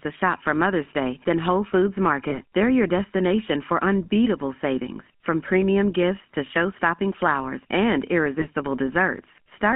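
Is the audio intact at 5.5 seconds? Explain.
No. The speech at 5.5 seconds, as throughout the clip, has passed through the GSM full-rate codec, which models the vocal tract and drives it with a sparse, regularly spaced pulse excitation. This leaves a plainly audible buzzy, gravelly roughness confined to roughly 150 Hz to 3.4 kHz, which fits a 13 kbps phone link.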